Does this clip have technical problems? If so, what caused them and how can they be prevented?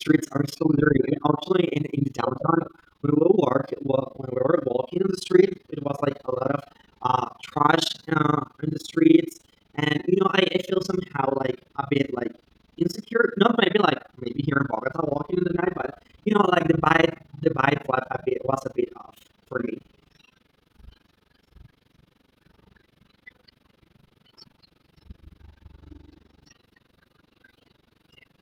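Yes. Overlap-add ripple runs throughout: window overlap that doesn't sum to constant gain makes the level dip about 60 dB around 20 times a second, a fast flutter. Prevent it by choosing window and hop sizes that satisfy constant overlap-add.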